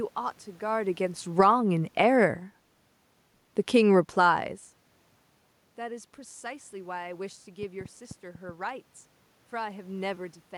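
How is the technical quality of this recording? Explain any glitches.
There are three glitches, two of them gain-control moves near the start and one burst of clicks later on.

From 0.05 to 2.47 s the automatic gain falls by about 4 dB. The AGC judged the input too hot and eased its gain down gradually, so the speech and the room noise behind it sink together. The talker shifting around 0.5 s is real movement, not part of this.

Inside that stretch, from 1.47 to 1.87 s, there's a brief automatic gain rise of about 3 dB. The control briefly decided the level was too low and pushed back up, so voice and background swell together for that moment before the downward drift resumes.

Between 7.63 and 8.50 s there's a train of clicks, about seven of them at roughly 5.8 per second with uneven spacing. They peak around 15 dB above the speech. It sounds like ticking laid over the audio, likely from electrical interference or a faulty connection.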